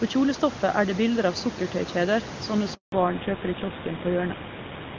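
A handover gap runs from 2.74 to 2.92 s in this speech recording, right after "bilder av sukkertøykjeder sånne". The call was passed between networks, no speech frames arrived for about 180 ms, and the audio drops out abruptly and stays silent until the new link carries sound again. Fallback to narrowband follows from 2.92 s to the end. All content above 4 kHz disappears, so the speech turns dull and rougher. Before the break, the audio is wideband HD Voice, which fits AMR-WB at a high rate. After the break, the sound fits an older narrowband GSM full-rate codec.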